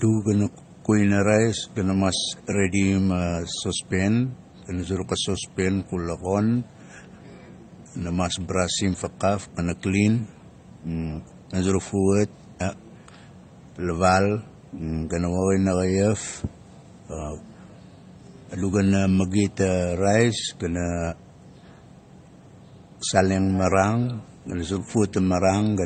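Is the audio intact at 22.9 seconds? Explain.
No. At 22.9 seconds, as throughout the clip, nothing sounds above about 8.7 kHz, and two kinds of coding artefact are heard together, likely from transcoding between lossy codecs, MP3 at 32 kbit/s then HE-AAC. Unlike a single codec's damage, each stage's artefacts are stacked.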